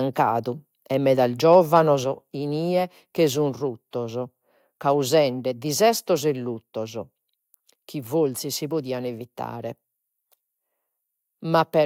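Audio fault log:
1.52–1.79 s, microphone overload: The input level was likely set too high, so the loudest peaks drove the converter about 1 dB past its ceiling, and around one percent of samples in this stretch have their tops sheared flat. Between "e meda" and "inie che sun", the strongest syllables gain a harsh, gritty crackle as the squared-off waveform adds distortion harmonics that were not in the original sound.
2.04 s, microphone volume stepped down: Shortly after the distorted peaks, the calling software likely reacted to the overload by cutting the microphone's input volume in a single step of about 4 dB. The change arrives just before "inie che sun", and from that point both the voice and the background sit quieter, with an abrupt drop instead of a gradual fade because the device gain was switched all at once.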